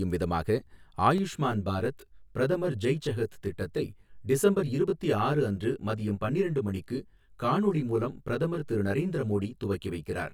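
From 1.18 s to the end of the clip, one channel runs late by roughly 20 ms, and the two are summed to mono, producing channel delay (comb filtering). Where the copies meet out of step, energy shared by both cancels at evenly spaced frequencies, with the first notch down around 30 Hz and further notches repeating closely up the spectrum. The speech turns rough, with a faintly doubled, smeared edge.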